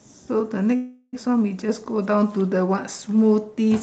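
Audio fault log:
0.75 to 1.28 s, call audio freeze: the sound hangs as a fading buzz for 375 ms, likely delayed packets, then picks up where it stopped with nothing lost.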